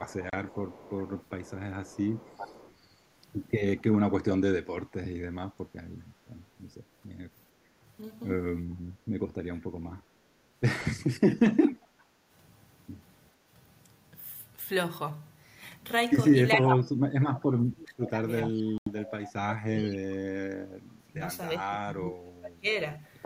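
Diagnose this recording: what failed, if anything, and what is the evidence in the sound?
Echo leak, at the call-processing stage. A fainter repeat of the speech trails the original by about 0.4 s (401 ms) from 0.06 to 2.75 s, and again at 3.79 to 3.95, 11.52 to 12.04 and 19.78 to 19.88 s, sitting about 25 dB down. From 16.68 to 17.39 s it is roughly as loud as the direct speech. On a spectrogram, the harmonic patterns reappear shifted 401 ms later. The likely cause is a loudspeaker-side echo canceller letting residual pickup back into the line.

Bluetooth dropout, at the wireless playback link. The output drops to silence at 0.30 to 0.35 s, with about 28 ms missing, and at 18.78 to 18.88 s, with 84 ms missing. Speech resumes further along, as though it had kept playing. The waveform shows flat gaps with abrupt or briefly faded edges, and the spectrogram shows full-band vertical blank strips. 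The gap lengths fit runs of lost packets of about 14 ms each, likely two and six, missing their delivery deadline.

Speech suppressed in double talk, in call processing. From 11.84 to 11.90 s the speech dips by about 15 dB for around 70 ms. From 16.54 to 22.68 s the level repeatedly sinks by up to about 30 dB, affecting roughly 5 s in total. The waveform envelope shows ragged notches. The likely cause is an echo canceller attenuating the near talker while the far end was also active.

Background gated by the echo canceller. Between 12.18 and 12.29 s, the room tone dips by about 8 dB for roughly 100 ms, right after echo activity, then recovers. The waveform shows a brief step down in the noise floor between sounds. The spectrogram shows a short, lighter band across the whole background. The canceller clamped the microphone gain while the loudspeaker was playing and released it shortly afterwards.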